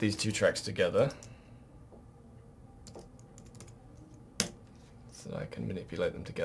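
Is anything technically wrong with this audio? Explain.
Yes, aliasing runs through the whole clip. High content above 12 kHz folds back down to unrelated, inharmonic frequencies, consistent with resampling to 24 kHz without an anti-alias filter. The result is gritty, metallic highs about 20 dB under the signal, unlike a clean low-pass, which only dulls the top end.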